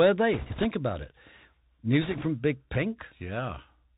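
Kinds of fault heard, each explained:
Bluetooth CVSD headset codec: The whole clip has the sound of a narrowband Bluetooth headset link. CVSD sends one bit per sample, each saying only up or down, with a step size that adapts. The damage is plainly audible. Nothing above 4 kHz gets through, so the speech sounds boxed in. Loud high sounds outrun the step and distort. S sounds turn scratchy. A granular hiss sits under the speech throughout.
bit errors on a Bluetooth voice link: Twice the link flips bits, and a rushing, crackly noise rises over the speech. The first burst runs from 0.33 to 0.65 s, ending just before "about it". The second runs from 2.02 to 2.27 s and is slightly milder. The error rate is a few percent in each burst. Each CVSD bit carries only a tiny step, and errors fade out quickly. So there are no loud clicks, only a grainy wash of noise.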